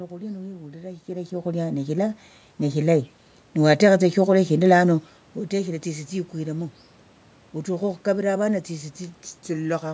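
Speech with automatic gain rising from 1.06 to 3.09 s. The gain control judged the input too quiet and lifted it by about 4 dB, so voice and room noise swell together. On a waveform, envelope and noise floor climb in step, and a spectrogram brightens evenly across bands.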